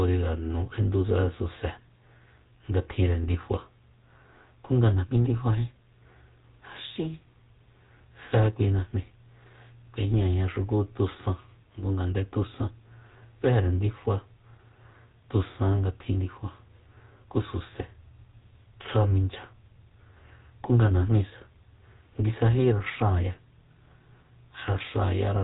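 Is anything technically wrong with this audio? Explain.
Yes. Throughout the speech, the GSM full-rate codec is plainly audible. It models the vocal tract and drives it with sparse, regular pulses. Bitrate fits about 13 kbps. Nothing passes above 3.8 kHz. The result sounds buzzy, gravelly and muffled.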